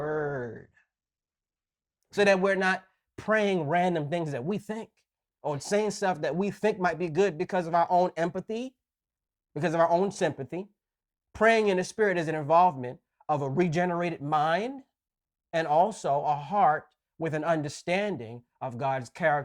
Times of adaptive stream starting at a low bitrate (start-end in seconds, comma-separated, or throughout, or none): 0.00-2.00